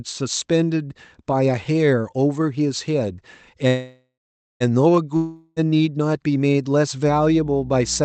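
At 3.67 s the sound stops moving forward and turns into a buzzy continuation of the last sound. It fades out, and the final half second or so is silence. The audio resumes at 4.63 s from exactly where it left off. Nothing is lost, but the stretch afterwards now runs close to a second late. This is a call audio freeze, likely caused by packets being held up until the jitter buffer ran dry.

From 5.16 s to 5.59 s there is a second break. Again the last sound is stretched into a fading hiss-like tail, this time without reaching silence. When the audio returns, it has skipped ahead. About 0.4 s of the speech is simply gone. This is a long network dropout, likely where the packets never arrived in time to be played, as opposed to arriving late.

From 7.07 s to the end a steady low tone sits under the speech. It is a 60 Hz mains hum with low harmonics, roughly 20 dB below the speech. It points to a ground loop or a transformer close to the cabling. 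The whole clip also carries the band-limiting of a call codec, with nothing above about 8 kHz.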